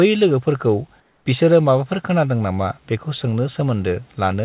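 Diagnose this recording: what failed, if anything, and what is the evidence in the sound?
From 1.0 to 1.26 s the room background gives way to a flat, featureless hiss about 3 dB quieter, lasting 260 ms before the original background returns. This is comfort noise in place of the background, a call-processing fault. The likely cause is discontinuous transmission: the sender's voice detector judged the pause silent and stopped sending, and the receiver filled the gap with synthetic noise matched only roughly to the room. The call path's 4 kHz band limit, consistent with G.711 A-law, applies throughout.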